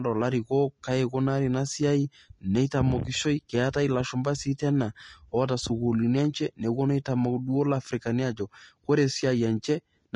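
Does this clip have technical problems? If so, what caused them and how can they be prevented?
Yes. Throughout, the speech sounds grainy and hissy, with nothing above 10.6 kHz, likely from Vorbis compression at a low bitrate near 32 kbps. Encoding at a higher quality setting would prevent it.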